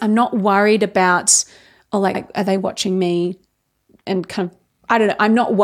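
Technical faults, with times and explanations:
2.14–2.21 s and 4.74–4.79 s, repeated frames. After "not worried about oh", a 70 ms block plays twice before "are they watching me". After "kind of", a 46 ms block repeats. Each is a short stutter. The lengths fit runs of whole compressed frames, and each repeat lengthens the audio by its own duration.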